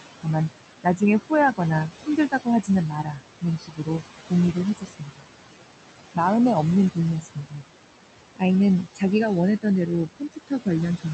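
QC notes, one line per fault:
Throughout: noise suppressor artifacts. The suppressor pulls the steady background down by about 17 dB frame by frame, so the noise floor sinks in pauses and climbs back under each phrase. This is different from the room noise itself, which sits only about 11 dB below the speech and forces the suppressor to work hard. It also differs from the Opus coding, whose steady 8 kHz band limit does not move with the speech.
0.83–1.6 s, 1.91–2.69 s, 3.04–3.88 s, 4.25–5.28 s, 6.91–7.64 s, 10.08 s to the end: speech cut by the noise suppressor. In each span the suppressor mistakes quiet parts of the speech for noise and turns them down by about 14 to 19 dB. The deepest drop is at 4.25–5.28 s. The affected parts total about a tenth of a second early on and grow to a few tenths in the middle spans, so soft consonants and endings sound swallowed. This is not packet loss: there is no hard gap or click, and the background ducks along with the speech.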